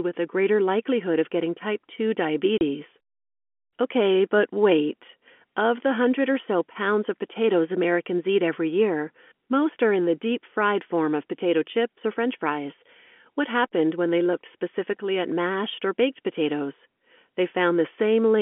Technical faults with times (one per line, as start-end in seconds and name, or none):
2.58-2.61 packet loss filled with silence